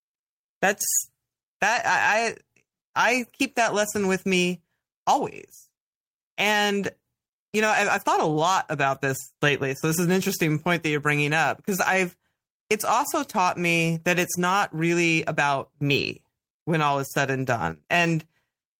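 A speech recording with nothing technically wrong with it.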